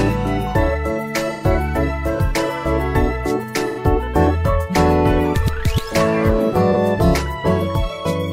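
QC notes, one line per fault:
1.33–1.42 s, 3.68–3.79 s, 6.71–6.76 s: AAC frame loss with concealment. Each gap is short, about 85 ms at the first two points (which fits two consecutive frames of about 43 ms each) and about 43 ms at the last (one frame). The decoder fills each hole by reusing the last good spectrum with randomised phase and interpolated energy, so instead of a dropout you hear a brief smeared, noisy, phasey patch where the detail of the audio blurs.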